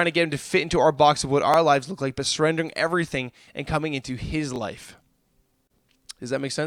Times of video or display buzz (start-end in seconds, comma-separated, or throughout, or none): none